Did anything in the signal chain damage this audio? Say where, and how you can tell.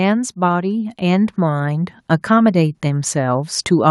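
Yes: in call processing, automatic gain rising from 0.35 to 2.01 s lifts the level by about 7 dB, so speech and background swell together.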